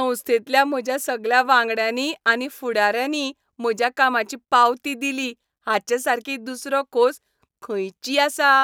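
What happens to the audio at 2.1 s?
Nothing goes wrong at 2.1 s; the speech continues without any audible fault.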